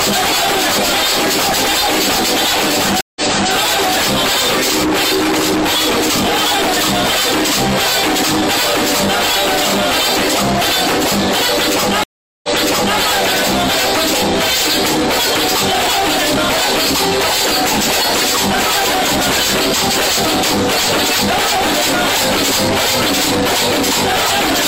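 The audio has two stream reconnects: dropouts at 3.01 s (152 ms silence) and 12.04 s (400 ms), each restarting the decoder and replaying material 341 ms and 555 ms earlier, from the server's resent burst.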